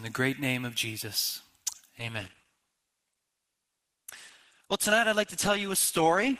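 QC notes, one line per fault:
1.98 s to the end: adaptive stream at a lower bitrate. A sudden, gapless switch to a leaner encode removes everything above 12.1 kHz, dulling the treble and raising codec artefacts.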